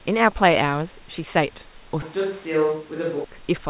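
From 2.02 to 3.24 s the speech abruptly turns hollow, roomy and about 5 dB quieter, likely a switch to a distant microphone, not a gain dip.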